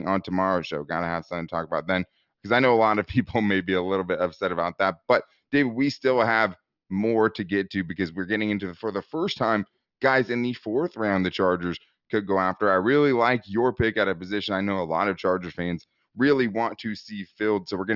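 Listening through the speech recording, nothing stood out as a technical fault at any point.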